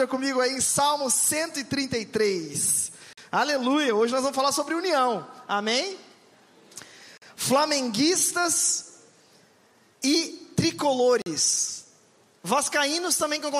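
At 3.13 s, 7.18 s and 11.22 s the sound drops into a hard-edged hole about 44 ms long, a gap between chunks. The audio arrives in 4-second blocks with silence inserted at each join, so nothing is lost, but playback stalls briefly at every boundary.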